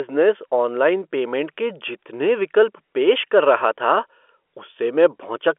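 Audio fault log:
No faults heard in this telephone-band speech recording.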